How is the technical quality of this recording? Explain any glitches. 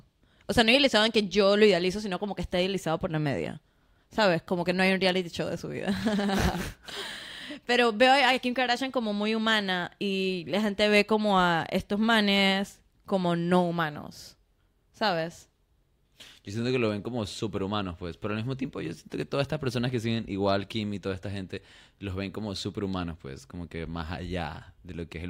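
The recording has no technical faults that I can hear. Nothing in the speech is interrupted or damaged at any point, so there are no glitches to explain.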